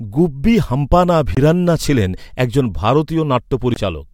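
At 1.35 to 1.37 s and again at 3.74 to 3.76 s, the speech drops to about 22 ms of silence and resumes; likely a Bluetooth stall, where delayed packets starved the playback buffer.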